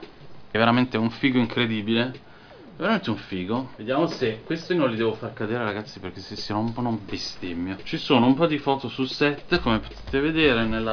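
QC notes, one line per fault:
No faults heard anywhere in this clip.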